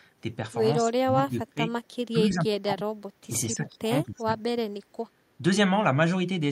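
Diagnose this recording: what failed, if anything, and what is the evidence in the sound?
Call processing failed, with speech suppressed in double talk. The speech dips sharply at 0.77–1.6 s, 2.12–2.87 s and 3.27–4.31 s, by roughly 25, 20 and 15 dB. The likely cause is an echo canceller that could not separate this talker from loudspeaker echo, so it attenuated both.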